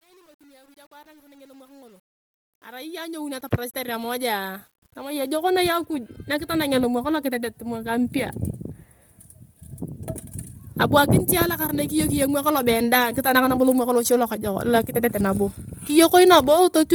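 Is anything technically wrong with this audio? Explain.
Yes, the speech has a heavy, breathy graininess all the way through, most likely from Bluetooth LC3 compression at a low rate, something like 32 kbps with 10 ms frames. The codec throws away much of the upper spectrum and fills it with noise, giving that smeared, hissy edge even though content still reaches about 20.1 kHz.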